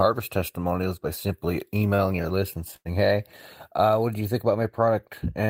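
At 1.95 to 2.01 s, right after "testimonials by simply", one speech sound is held too long with a slight buzz or dip, and again at 2.76 to 2.88 s after "list and". Both are a short stall from a late packet: the jitter buffer ran dry and the receiver stretched the last sound, by about 30 ms and then 90 ms, before resuming where it left off, so nothing is lost.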